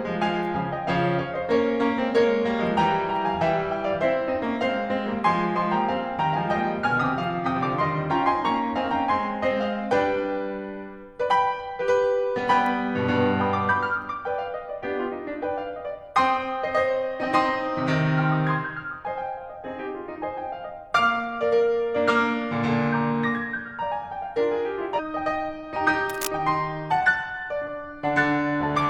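At 24.94 s the music lurches forward: a tiny blip lasting until about 25.00 s, and the passage resumes at a later point. That abrupt jump with its small click is the sound of a stream segment skipped. Likely one chunk of the segmented stream failed to arrive, and the player moved on to the next segment instead of stalling, so a stretch of the programme is simply absent.

Shortly after, from 26.09 to 26.27 s, a burst of rough, irregular scratching rides over the music, loud enough that it sits only a little below the music itself. This is cable scratch noise: likely a worn cable, connector or control being disturbed, its contact resistance jittering rapidly and injecting dense, uneven crackle into the signal path for that brief moment before settling again.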